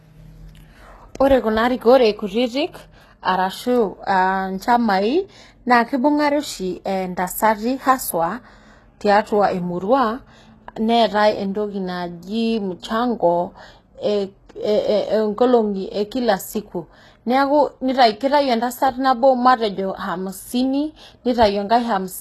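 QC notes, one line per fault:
Throughout: HE-AAC compression, likely at a low rate near 16 kbps. Copied-up treble makes s sounds gritty and lispy. The spectrogram shows smeared, repeated upper bands and a hard ceiling at 12.3 kHz.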